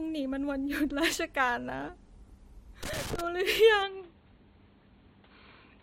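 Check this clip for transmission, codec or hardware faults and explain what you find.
Two faults are audible in the speech. From 2.83 to 3.21 s there is loose connector crackle: an irregular burst of scratchy crackle. This is what a worn or dirty contact does when it shifts. The connection makes and breaks many times in under half a second, chopping the signal, and any DC on the line turns each break into a click.

From 3.83 s to the end, the sound abruptly turns dull and boxy, losing everything above 4.4 kHz. A faint new background noise, well below the speech, appears at the same moment. There is no gap at the change and the level stays about the same. This is likely the input being switched to a poorer device, such as another microphone or a headset's call profile, whose narrower band and own noise floor replace the original input mid-recording.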